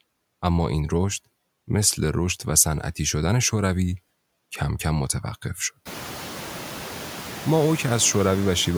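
Noise suppressor artifacts run throughout this speech. The suppressor cuts steady noise by about 7 dB, so the background dips between words and swells beneath them. The room noise rises around 6 s.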